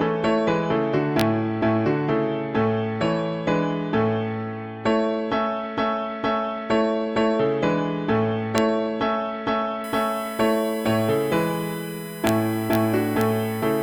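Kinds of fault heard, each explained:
Integer overflow: loud peaks wrap to the opposite sign instead of limiting, giving sharp cracks near 1.2, 8.58, 12.27, 12.73 and 13.21 s; waveform shows sudden sign flips, spectrogram vertical broadband lines.
USB whine: bus-frame current leaking into the audio as a steady 1 kHz-based whine, strongest at 2 kHz, from 9.84 s to the end at roughly -20 dB; spectrogram shows flat horizontal lines.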